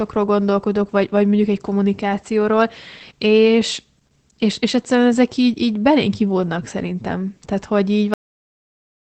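From the start, the speech sounds muffled, slightly hoarse and faintly robotic, with nothing above 8 kHz. This is Opus voice compression in its SILK linear-prediction mode, working in wideband. The excitation is coded coarsely, which fits a bitrate around 12 kbps.

At 8.14 s the speech breaks off mid-sound and drops straight to digital silence with no decay, and the silence lasts for the final 0.9 s. This is a cut-off end: the closing buffers were never written, so playback simply stops.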